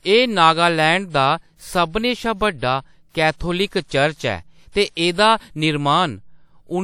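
Pre-echo appears three times in the speech, at 3.10 s, 3.67 s and 4.70 s, where coding noise smears about 44 to 54 ms ahead of sharp attacks, giving a short hiss before each onset. Unlike reverberation or echo, this haze comes before the sound, not after it.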